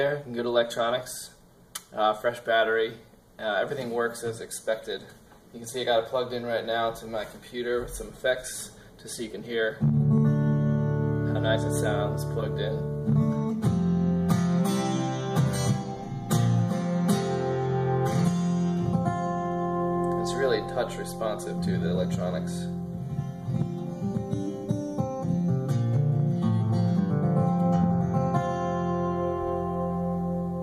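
No technical faults are audible.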